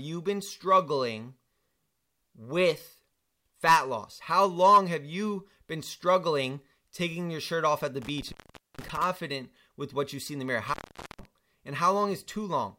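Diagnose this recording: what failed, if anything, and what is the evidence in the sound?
An intermittent contact in the analogue wiring: the speech cuts out for about 0.46 s within 8.02–9.04 s and about 0.45 s within 10.68–11.25 s, with crackle at each break and faint hiss beneath. A loose plug is briefly opening, unlike a clean, silent digital dropout.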